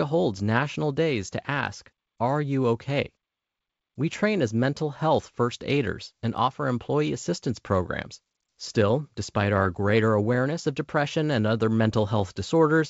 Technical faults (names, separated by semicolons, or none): none